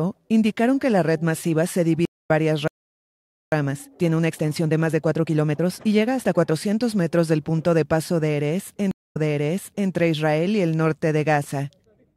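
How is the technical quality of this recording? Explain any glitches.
The recording has four delivery glitches: two interruptions with silence, a stretch of hurried playback, and a jump backward.

Stream reconnect at 2.05 s: the connection dropped and a fresh decoder started mid-stream. There is a 212 ms silence, and the audio resumes roughly 0.2 s later than where it stopped.

Stream reconnect again at 8.91 to 9.90 s: after a 200 ms gap, the server resent buffered data, so the audio restarts 784 ms earlier and a short passage is heard twice.

Playback stall from 2.68 to 3.52 s: the output goes silent for 845 ms mid-flow, likely because the player ran short of data or its thread was blocked.

Time-compressed catch-up from 3.52 to 6.52 s: to clear its backlog, the player cuts and cross-fades small pieces. The sound runs at 1.25 times normal speed at unchanged pitch.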